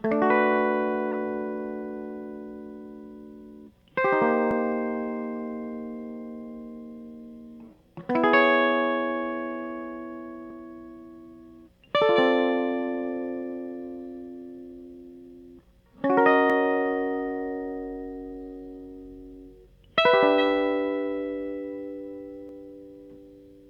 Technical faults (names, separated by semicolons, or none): corrupt frame decoded; audio missing between chunks